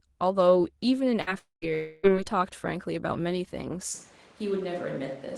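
Speech over a call link, and it gets choppy early: at 1.21 to 1.30 s there's a burst of packet loss, with about 53 ms of stretched, fading fill covering roughly 60 ms of lost audio before it jumps ahead. Right after, from 1.39 to 1.65 s, the sound smears into a fading fill and then about 150 ms of dead silence, and from 1.74 to 2.06 s it's all concealment fill for nearly 300 ms; both are likely long network dropouts, each skipping a quarter- to third-second of content. Then at 3.94 s the tone suddenly goes hollow and roomy, about 5 dB quieter, with background noise only about 25 dB under the speech, and it stays that way to the end, likely a switch to a distant microphone. The top end tops out around 12 kHz with coding grit, which fits an Opus stream at about 24 kbps.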